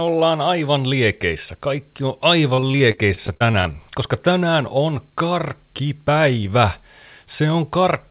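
Repeated packet loss (robotic sound) runs from 2.54 to 3.76 s. Packets went missing or arrived late again and again, leaving more than a dozen short holes, the longest about 39 ms. Each hole was bridged by extending the preceding sound, so roughly a quarter of that stretch is synthetic fill. The speech turns choppy, with fragments dropped, all within the call path's narrowband ceiling at 4 kHz, which fits a G.711-style codec.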